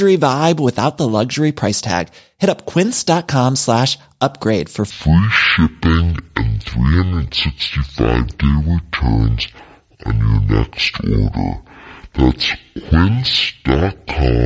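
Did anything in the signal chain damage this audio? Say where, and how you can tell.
Yes. From 4.9 s to the end, the speech plays at half speed and drops a full octave, 12 semitones. That is a wrong sample rate at playback. Speed and pitch fall together, which fits 32 kHz audio clocked out at 16 kHz without conversion.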